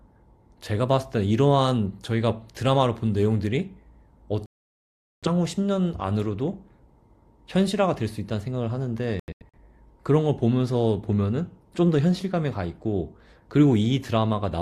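At 4.46 s the speech cuts to silence until 5.28 s. This is a digital broadcast dropout. The receiver muted while frames were corrupt, so 768 ms is lost. From 9.20 to 9.58 s, several short holes break the speech. The longest lasts 85 ms, and 213 ms is lost in total.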